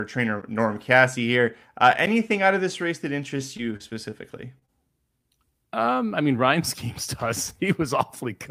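Speech, and there are three kinds of trouble in it. First, two blocks of digital silence, each about 10.7 ms long, at 0.42 s and 2.06 s, the second landing just before "out of this race". Both are 512 samples, which fits a 512-sample buffer. The output gets zeros instead of audio, either because the buffer wasn't filled in time or because a calculation produced invalid numbers. At that length you don't hear a hole, just a tick or dip where the sound drops out and snaps back with no fade. Then from 3.37 s to 4.14 s, right after "of this race that", there's a stretch of repeated packet loss, the robotic-sound kind. Five packets went missing or arrived late, about 80 ms of audio in total, with the longest gap at 34 ms. The receiver patched each hole by extending the last bit of sound, adding about 96 ms of filler, roughly 13% of that span, and the next gap came soon after, so the passage comes out choppy with pieces missing. 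Finally, there are two bursts of short concealed packet loss close together: 4.59 to 4.64 s and 4.66 to 4.70 s, each covering 20 ms of missing audio, patched with about 29 ms and 20 ms of filler. The decoder continued the previous sound and then blended back into the real signal, so each one is heard as a brief smear or wobble.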